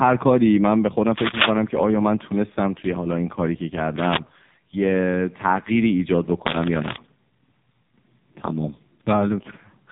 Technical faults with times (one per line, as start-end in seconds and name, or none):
0.00-9.92 AMR narrowband mobile codec
6.42-6.97 cable scratch noise